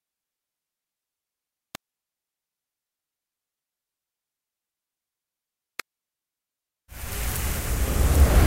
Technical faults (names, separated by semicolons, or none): electrical switching spike